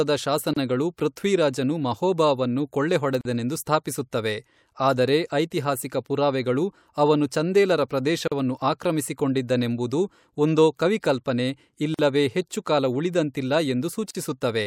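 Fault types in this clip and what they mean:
Gap at a join of encoded pieces: the speech was encoded as separate segments and spliced without trimming, so each encoder's start-up delay and last-frame padding remain as silence. Five short dropouts open in otherwise continuous sound, at 0.53 s (30 ms), 3.21 s (40 ms), 8.28 s (40 ms), 11.94 s (45 ms) and 14.11 s (42 ms). Each has smeared edges, and the speech resumes exactly where it stopped.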